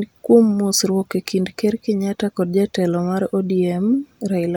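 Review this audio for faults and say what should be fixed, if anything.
Nothing in the speech needs fixing, because no technical fault can be heard anywhere in it. There is no remedy to recommend.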